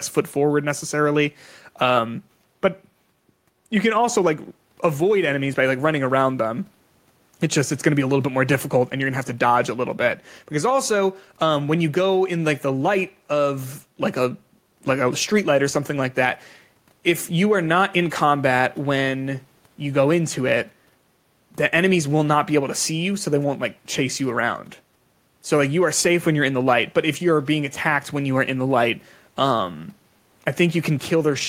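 No technical faults can be heard anywhere in the speech. Nothing in the recording needs a timestamp or a note of concern.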